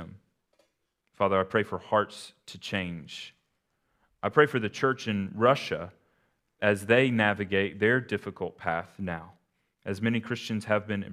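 No technical faults turn up anywhere in this bit of speech, so there's nothing here to pin a time on or trace back to a cause.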